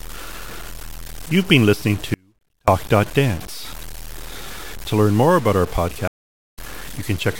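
Throughout the speech there is grainy, signal-following distortion, with error only about 20 dB down. This fits low bit depth without dither, likely from truncation to around 6 bits. At 2.14 s, just after "been listening", the audio drops out to a faint residue roughly 35 dB below the speech for 0.54 s, likely from a lost input feeding a still-live path. At 6.08 s, after "learn more about our", a stream reconnect leaves 0.49 s of silence, and the speech resumes about half a second further on.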